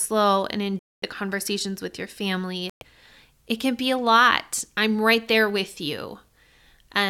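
Speech, with two Bluetooth dropouts. The sound cuts abruptly to silence from 0.79 to 1.04 s, for 232 ms, and again from 2.70 to 2.83 s, for 116 ms. Each time it resumes further along, as if it had played on. Late audio packets were likely dropped on the wireless link.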